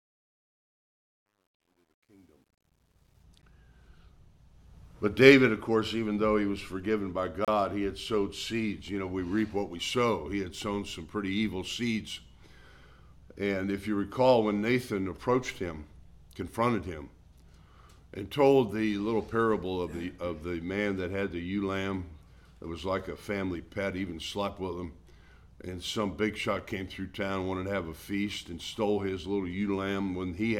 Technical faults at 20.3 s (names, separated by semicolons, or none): none